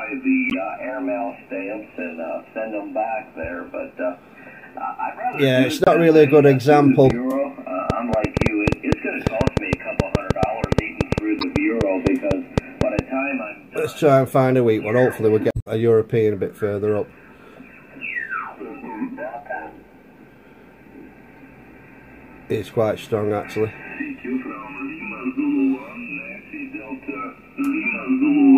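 Brief blips at 0.50 to 0.54 s and 5.84 to 5.88 s are damaged data in a compressed stream. Corrupted bytes leave the decoder misreading frames, losing sync and jumping to the next valid frame header.

From 7.10 to 13.00 s a train of clicks ticks over the audio at about 5.3 per second, unevenly spaced, around thirty in all and roughly 20 dB above the sound. The likely cause is interference or a faulty connection injecting repeated pulses.

The same decoder fault returns at 11.39 to 11.44 s, inside the click train, and as a longer glitch from 15.51 to 15.67 s.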